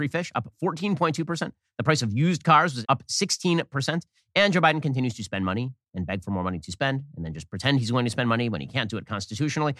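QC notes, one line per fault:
No faults heard on the speech track; nothing to flag.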